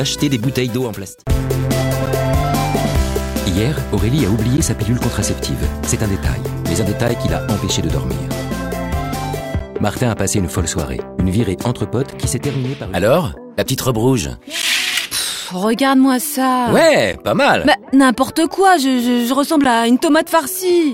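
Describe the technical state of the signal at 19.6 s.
At 19.64 s there is a gap between chunks: a 12 ms hard-edged silence at the boundary of 2.5 s blocks, interrupting the signal without losing any audio.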